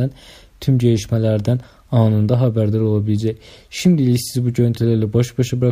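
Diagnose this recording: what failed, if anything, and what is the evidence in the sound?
Nothing in the chain seems to have failed here, since there's no audible sign of trouble at any stage from the wiring through to playback.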